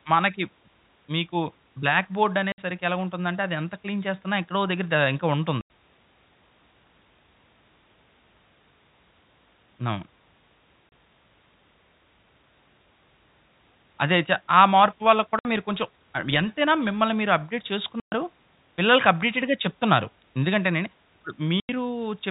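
Packet loss filled with silence cuts the speech at 2.52 to 2.58 s, 5.61 to 5.70 s, 10.89 to 10.92 s, 15.39 to 15.45 s, 18.00 to 18.12 s and 21.60 to 21.69 s. The receiver substituted silence for missing packets, leaving holes of 30 to 120 ms, all multiples of 30 ms, which fits a 30 ms packet. Each hole starts and stops abruptly, over the 4 kHz-limited telephone band of the G.711 line.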